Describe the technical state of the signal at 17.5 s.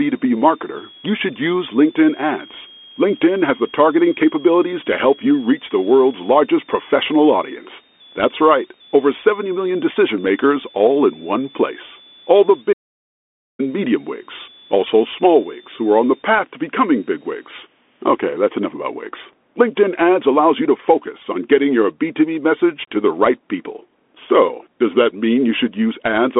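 A switching supply whistle runs from the start to 18.48 s, covering 17.5 s. A switching power supply running in an audible burst mode or beating with another one leaves a high tone drifting between 3.2 and 4.0 kHz, roughly 25 dB below the speech. The Bluetooth CVSD headset codec applies throughout. One-bit up-or-down coding with an adaptive step, which fits a 64 kbit/s link, confines speech to about 250 Hz to 3.5 kHz with nothing above 3.8 kHz, adding scratchy sibilants and granular hiss.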